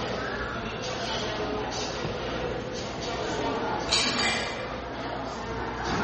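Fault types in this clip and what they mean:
MP3 compression: The audio has a hard ceiling at 8.4 kHz and a plainly audible watery, swirling quality throughout, most likely from MP3 encoding at a bitrate as low as 32 kbps. With so few bits, the encoder discards the treble and zeroes weaker frequency lines, letting them flicker on and off frame by frame. A spectrogram shows a flat cut-off at 8.4 kHz with scattered, blocky holes below it, and the waveform's attacks look smeared.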